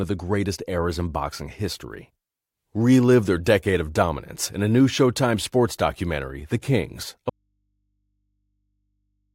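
At 7.30 s the speech drops out abruptly and never comes back, leaving only a low mains hum some 50 dB down until the end. That's an audio dropout to a faint residue, likely a lost signal feed while the input stayed live and open.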